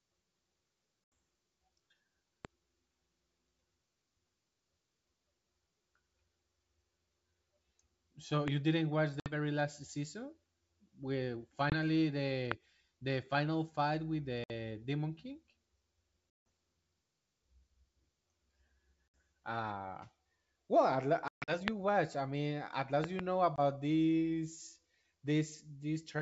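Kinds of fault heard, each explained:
Packet loss on an ADPCM call: The speech drops into hard-edged silent holes and comes back slightly distorted for a moment. There are eight gaps from 20 to 180 ms, the longest near 16.3 s and 21.3 s, the latter broken up over about 200 ms. Lost packets were filled with silence, leaving the decoder's adaptive predictor and step size out of step with the sender's until they re-converge.
Loud pop: Sharp single pops sit on top of the speech at 2.45, 8.48, 12.52 and 21.68 s, with a quick pair between 23.04 and 23.21 s. They peak about 15 to 25 dB above the signal, and the speech carries on beneath them. A sudden voltage step or pulse, likely from a plug, switch, static discharge or driver glitch, was added to the signal and shaped by the circuitry after it.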